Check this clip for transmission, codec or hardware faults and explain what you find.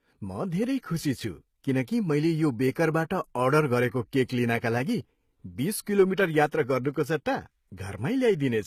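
One codec fault runs through the whole clip. Low-bitrate audio saved at a high bitrate, throughout: the speech has nothing above 14.9 kHz and carries low-rate coding artefacts. This likely comes from a very low-bitrate encode later re-saved as a larger MP3, which cannot restore the discarded detail.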